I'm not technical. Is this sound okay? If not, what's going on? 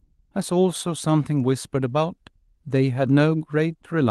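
Yes, nothing stood out as a problem when listening to this speech recording, which sounds as you'd expect from an ordinary online call.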